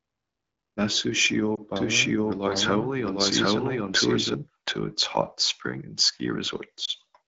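Lost AMR speech frames at 1.56 s and 6.85 s in this speech clip each cause a brief dip or warble. This fits a single 20 ms frame failing its checksum, with the decoder briefly repeating its last good pitch and vocal-tract settings at falling gain over AMR-WB's HD Voice band.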